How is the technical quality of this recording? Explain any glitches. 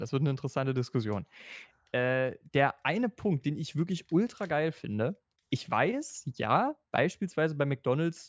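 No glitches or technical faults can be heard anywhere in the recording.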